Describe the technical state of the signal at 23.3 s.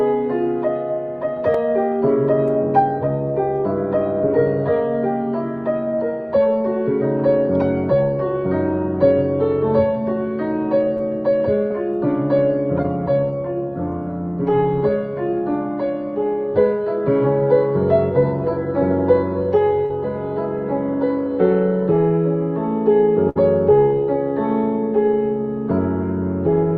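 At 23.29 to 23.37 s there is a burst of packet loss. For about 60 ms the receiver had nothing to play, so it extended the last sound it received and faded it out. The result is a brief held or smeared tail that decays, after which the audio picks up later than it should, with roughly 60 ms of material skipped. A plain dropout would fall to silence or click instead. Here the gap is filled with a decaying continuation, and the audio resumes with a jump. This sits within the Opus call path, which is band-limited to around 12 kHz.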